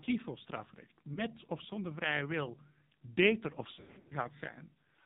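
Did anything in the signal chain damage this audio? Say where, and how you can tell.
Yes. At the codec stage, AMR narrowband mobile coding runs throughout: nothing above 4 kHz on the spectrogram, and heavy buzzy, synthetic speech, which fits AMR-NB's low 5.9 kbps mode, where a few pulses per subframe must drive the vocal-tract model.

On the network side, lost AMR speech frames appear at 1.14 s, between "voor strafrecht" and "of zonder vrije wil", as a single 20 ms warbling dip. From 3.74 to 4.14 s, after "vrije wil beter of", scattered losses across about 360 ms, the longest run 100 ms, stretch and fade the sound as the decoder repeats old parameters with falling gain. The waveform shows sagging envelope notches there.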